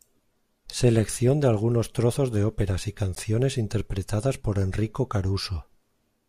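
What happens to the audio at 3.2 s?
At 3.15 s the speech drops out for about 13 ms in a block of digital silence. A short run of samples was replaced by zeros, so the signal cuts off and resumes with no fade. A gap this short is heard as a tick or a dip rather than as silence.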